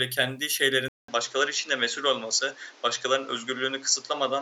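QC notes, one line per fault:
0.88 s to end, input likely switched to a poorer device: after a 200 ms silence the speech loses everything above 7.6 kHz and gains a new, faint noise floor while keeping a similar level. The gap and changed background point to a different input rather than filtering.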